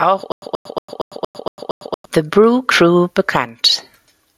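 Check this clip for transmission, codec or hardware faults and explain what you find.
Two faults are audible in this speech clip.

Gain pumping runs throughout. The likely cause is input gain set far too high, with a fast limiter or compressor clamping down on every loud syllable. The level swings by roughly 15 dB. Loud and quiet passages are pushed close together in level, which leaves the speech sounding squashed and breathing.

A stutter with silent gaps runs from 0.32 s to 2.05 s. The stream or player likely stalled, and on each retry it replayed its last fragment before running dry. A 130 ms burst of speech repeats seven times at a steady 232 ms period, each repeat followed by about 100 ms of dead digital silence. The speech that should have filled that stretch never arrives.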